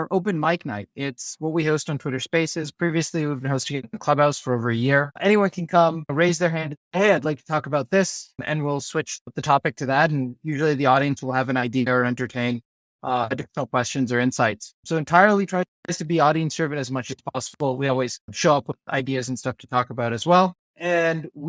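Nothing stood out on listening to this recording.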